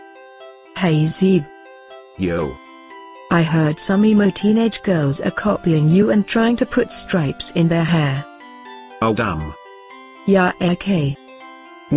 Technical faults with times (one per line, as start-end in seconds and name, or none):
none